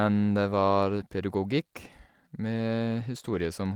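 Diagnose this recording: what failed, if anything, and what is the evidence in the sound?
No audible faults detected.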